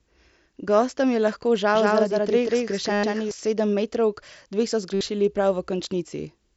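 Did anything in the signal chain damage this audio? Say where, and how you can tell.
Yes. Doubled audio track, 1.75 to 3.31 s, from after "je lahko" to before "sedemmetrovk dve so": an equally loud, dry copy trails by about 200 ms, likely a second capture path or misaligned edit.

Concealed Bluetooth headset packet loss at 2.93 to 3.04 s (105 ms) and 4.94 to 5.01 s (67.5 ms): the wireless link dropped packets, leaving a buzzy, looped tone that warbles as real audio returns.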